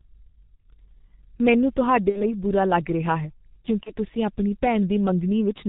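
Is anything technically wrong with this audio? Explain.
Yes. Throughout, the speech is heavily muffled and hoarse, with smeared consonants and nothing above 4 kHz. This is the G.723.1 codec, whose slow 30 ms frames at about 6.3 kbit/s discard detail. At 0.56 to 0.60 s, 2.09 to 2.21 s and 3.83 to 3.95 s, the voice turns briefly into a buzzy tone or coloured noise that fades, then stays weak. This is VoIP packet loss concealed by the speech codec. The decoder stretched its last pitch and filter over the gaps, which fit one, two and one lost 30 ms frames.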